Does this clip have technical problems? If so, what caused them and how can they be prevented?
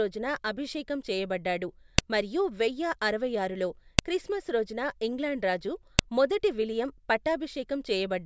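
Yes. A file header played as audio causes sharp clicks at 1.98, 3.99 and 5.99 s, one every 2 s where separate pieces of the speech were joined. Leftover header bytes are played as samples. On a waveform, each click is a narrow spike. On a spectrogram, it is a thin vertical line across all frequencies. To prevent it, strip each piece's header before joining or streaming the audio.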